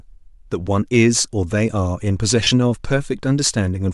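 At 2.43 s the speech breaks up for about 75 ms, until 2.51 s. These are lost LE Audio frames. Roughly 52 ms of audio is missing, spread through that span, with the longest gap around 30 ms. The gaps fit short 7.5 ms frames, likely from LC3 compression over Bluetooth. The decoder fills each hole by reusing the last spectrum with scrambled signs. The sound turns into a brief, noisy smear before it recovers.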